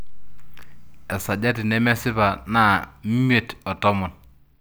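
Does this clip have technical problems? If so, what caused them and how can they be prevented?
No, nothing in this speech clip points to a technical fault, so there is no cause to trace and nothing to prevent.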